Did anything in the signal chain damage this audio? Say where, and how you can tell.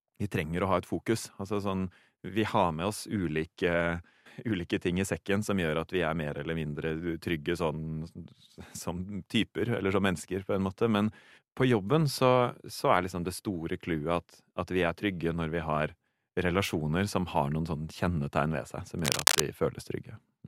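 Yes, in the analogue wiring. From 18.99 to 19.43 s, cable scratch noise rasps over the speech, louder than it. A worn connector being moved likely caused it.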